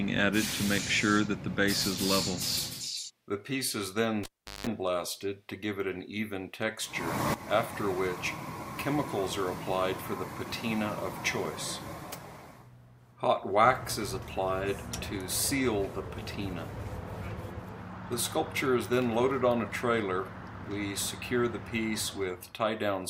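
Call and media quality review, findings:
Cable pulled and plugged in, 4.23 to 4.67 s. Pop at 4.23 s, then near silence for about 0.38 s as the live cable leaves the jack. 50 Hz mains buzz for about 0.18 s while only the tip makes contact, ground not yet seated. Second pop at 4.67 s as the sound returns. Probable component: input cable or connector.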